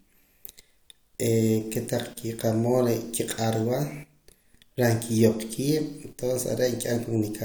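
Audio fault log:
No faults are audible anywhere in the recording.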